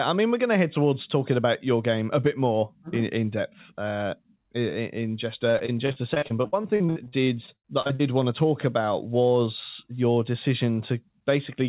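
From 5.5 to 8.01 s, right after "in just" and up to "want to talk about", the speech breaks up into repeated packet loss with a robotic sound. Twenty-two gaps fall in that stretch, the longest 79 ms. Each one is patched by extending the preceding sound, so roughly 28% of the span is concealment rather than real audio, and it comes out choppy. A spectrogram shows the harmonics frozen into short flat smears at each patch, sharp vertical seams between them, and a hard ceiling at 4 kHz from the call path, which points to G.711 mu-law. The waveform shows repeated cycles instead of natural envelopes.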